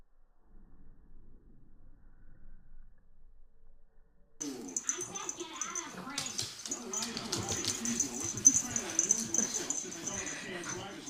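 No technical faults can be heard anywhere in the audio.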